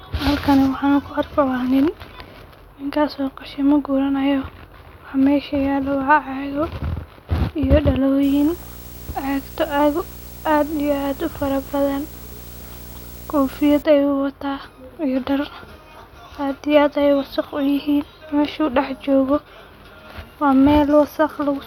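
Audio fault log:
8.23–13.83 s video or display buzz. A buzz rises under the speech and holds for about five and a half seconds. Its fundamental sits at 59.94 Hz, the field rate of an NTSC-style picture. A hash of harmonics rides on top of it. A thin, very high tone at 15.7 kHz joins it. That tone matches the line rate. A screen or video cable is coupling into the audio path. The interference sits roughly 20 dB below the speech.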